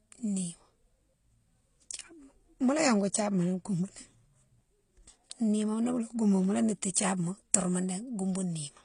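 From start to finish the speech carries the mixed artefacts of transcoding between lossy codecs. Nothing is heard above about 10.4 kHz, so the top octave is gone. That ceiling survives whatever stage follows it. Swirly, watery smearing sits on top of a thin, synthetic-sounding upper band. This points to AAC-LC at around 32 kbit/s re-encoded as HE-AAC at around 24 kbit/s. That second encode was likely the cause of the stacked damage, spending its bits on the earlier errors and adding its own.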